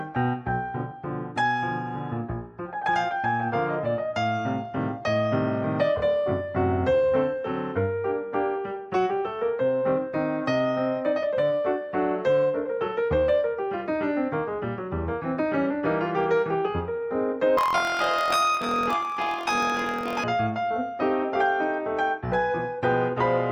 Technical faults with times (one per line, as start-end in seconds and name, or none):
17.57-20.25 planar audio read as interleaved